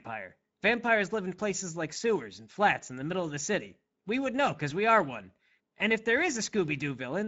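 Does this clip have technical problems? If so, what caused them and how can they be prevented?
Yes. The speech carries Speex codec damage the whole way through. It sounds hoarse and grainy because this CELP coder gets too few bits to rebuild the excitation cleanly, and nothing survives above 7.7 kHz. That fits a setting of around 17 kbps. To prevent it, raise the Speex quality setting or switch to a modern codec such as Opus.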